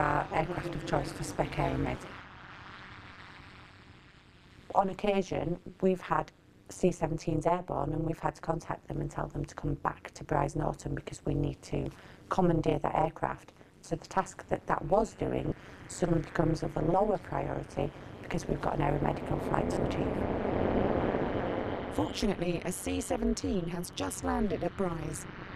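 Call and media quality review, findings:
Overlap-add ripple, whole clip. Metallic buzz near 200 Hz with extra tones around each note, level swinging by about 60 dB once per frame. Probable component: frame-based processing stage whose window overlap doesn't sum to constant gain. Unlike codec warble or packet loss, the buzz is steady, periodic and present throughout, never tied to isolated events.

Lost LE Audio frames at 3.12–3.18 s (52.5 ms), 15.49–15.52 s (22.5 ms) and 19.73–19.77 s (37.5 ms). Tonal content smears into noise. Durations fit 7.5 ms LC3 frames. Probable component: Bluetooth LE Audio link, with LC3 concealment replaying the last spectrum with random phase signs and fading it. Unlike the ripple, these are short, irregular gaps with a noisy texture, not a periodic gain buzz.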